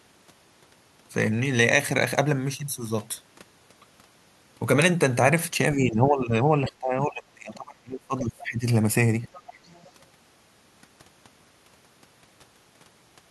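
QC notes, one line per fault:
5.74–8.66 s, speech suppressed in double talk: the talker's level drops sharply for about three seconds, by roughly 25 dB at its deepest. This is likely an echo canceller that heard both sides at once and turned everything down.
9.24–9.87 s, other side's voice leaking through: a second voice comes through faintly, around 25 dB below the talker, for just over half a second. This is likely far-end audio from a loudspeaker that echo cancellation failed to fully remove from the microphone.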